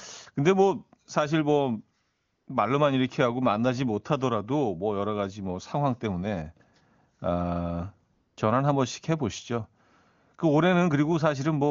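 AMR comfort noise appears at 2.01 to 2.47 s and 8.13 to 8.37 s: the sender stopped transmitting speech frames for about 460 ms and 240 ms, and the receiver filled each gap with smooth synthetic noise that switches in abruptly, replacing the real background.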